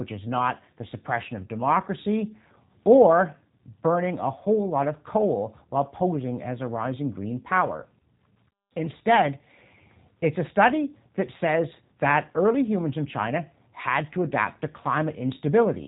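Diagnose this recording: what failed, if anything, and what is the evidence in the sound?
The failure is at the codec stage: the speech has passed through a G.729 codec for the whole clip, and the damage is plainly audible. The voice sounds rough and faintly synthetic because each 10 ms frame is rebuilt from a vocal tract filter, a pitch predictor and a few pulses rather than the real waveform, which fits an 8 kbit/s rate. On a spectrogram, energy stops sharply at about 3.8 kHz, with smeared harmonics below.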